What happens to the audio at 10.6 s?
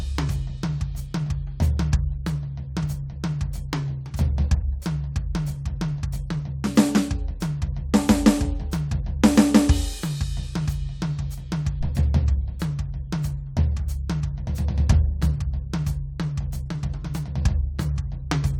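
Nothing goes wrong at 10.6 s; the music plays through that moment intact, with no dropout, click or other fault.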